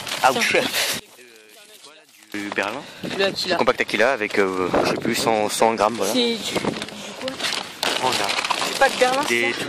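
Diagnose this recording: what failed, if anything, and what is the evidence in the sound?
Between 0.99 and 2.34 s the sound drops by about 27 dB. It's likely one channel inverted in the analogue wiring, so the shared content cancels when summed to mono.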